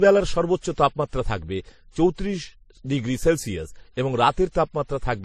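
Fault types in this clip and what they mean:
Transcoding between lossy codecs: the speech was likely encoded in one low-bitrate lossy format, consistent with WMA, then re-encoded as MP3, which spent its bits on the first codec's damage. Both codecs' artefacts are heard together, and nothing remains above 13.9 kHz.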